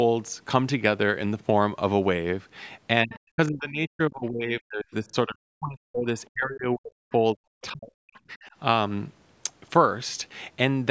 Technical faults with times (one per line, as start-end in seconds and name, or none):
3.04-8.51 speech suppressed in double talk
3.12-3.19 other side's voice leaking through